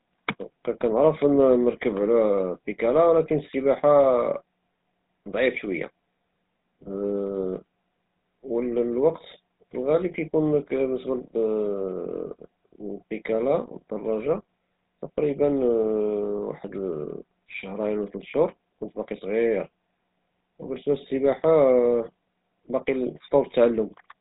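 From start to finish the speech carries GSM full-rate codec damage, heard as a buzzy, gravelly roughness that fits a 13 kbps stream. The voice is rebuilt from a vocal-tract model driven by sparse regular pulses, and a spectrogram shows a hard ceiling at 3.8 kHz.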